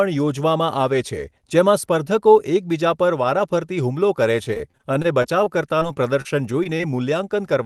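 Speech that has passed through a call path, with the top end stopping near 12 kHz, which fits Opus at about 24 kbps. From 4.43 to 6.81 s, just after "પર વારાફરતી હુમલો કરે", repeated packet loss gives choppy, robotic sound. Packets kept dropping. Each hole, the longest about 31 ms, was filled by stretching the last sound. About 13% of that stretch is patched this way.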